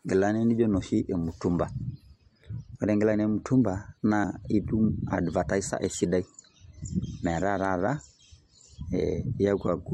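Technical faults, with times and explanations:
4.23 s and 9.34 s, compressed frames skipped: the speech jumps forward with no silent gap, losing roughly a tenth of a second at the first point and about half that at the second. This fits whole frames of about 23 ms going undecoded.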